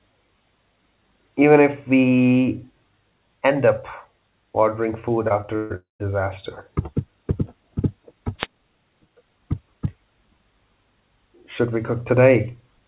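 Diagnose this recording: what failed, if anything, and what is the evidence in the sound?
Network stage, short concealed packet loss: right after "ordering food", about 20 ms went missing at 5.28 s and again at 5.42 s. Each gap was patched by extending the preceding sound, leaving brief smears.

Network stage, burst of packet loss: from 5.56 to 5.72 s, 140 ms never arrived. The decoder stretched the last sound into a fading buzz or hiss, then resumed further on.

Network stage, long network dropout: from 5.76 to 6.02 s, about 240 ms of audio is gone, likely a dropout. A fading continuation gives way to roughly 150 ms of silence before the sound returns.

Analogue radio link, wireless microphone noise hit: from 8.38 to 8.47 s, the FM microphone signal faded and receiver noise rose, producing a short swish of static over the sound.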